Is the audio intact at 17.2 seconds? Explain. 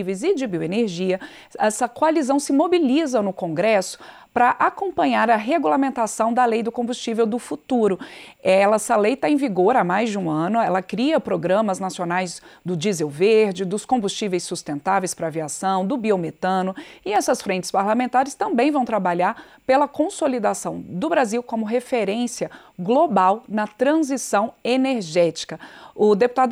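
No. At 17.16 s a single sharp click marks a case of dropped samples: likely a fraction of a millisecond of the stream went missing, so the waveform jumps straight to a later value. Nothing audible is removed, but the discontinuity produces a thin vertical line across the spectrum.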